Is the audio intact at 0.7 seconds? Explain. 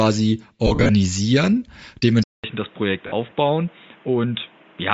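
No. Between 0.67 and 0.89 s, lost LE Audio frames left gaps totalling about 140 ms, the longest around 40 ms, which the decoder filled by repeating the last spectrum with scrambled signs, smearing the speech into noisy hiss. Underneath, likely Bluetooth LC3 compression at a low rate, fitting 32 kbps with 10 ms frames, strips and noise-fills the upper band, giving a plainly audible breathy, grainy edge.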